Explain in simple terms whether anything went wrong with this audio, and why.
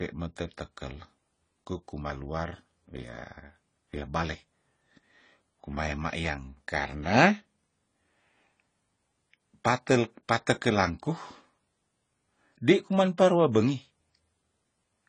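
The speech was likely squeezed too hard by AAC compression, so from start to finish it sounds dull and smeared, with nothing above 10 kHz.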